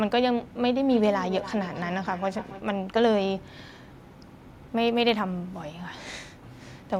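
From 0.91 to 2.69 s the speech returns on itself as feedback echo between two devices. Two devices in the same room share the call, so one loudspeaker replays audio the other microphone sent and that microphone captures it again. Each device's echo canceller handles only its own playback, so nothing removes this loop. The repeats trail the speech at roughly a third of a second, peaking about 14 dB below the speech.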